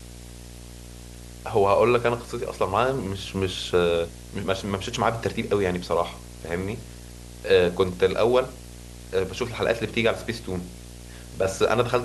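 A screen or video cable is coupling into the audio path of this speech recording, producing video or display buzz from start to finish: a 60 Hz buzz at the picture's field rate, topped with harsh hash, sitting only moderately below the speech level throughout.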